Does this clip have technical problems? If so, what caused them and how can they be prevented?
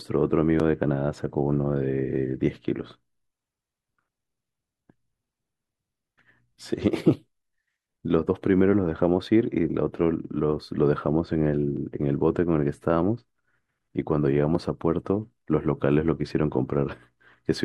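No, the signal shows no technical problems anywhere in the recording, so there is nothing to trace back to a cause or to prevent.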